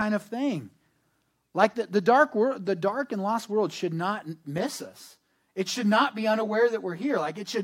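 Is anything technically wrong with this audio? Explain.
Yes. From 4.58 s, right after "lost world should not", to the end of the clip, there is channel delay causing comb filtering. One channel runs late by roughly 10 ms. When the two channels are summed to mono, the shared sound cancels at evenly spaced frequencies. The first notch falls near 50 Hz, with more spaced about 100 Hz apart above it. The speech turns hollow and phasey, with fixed notches.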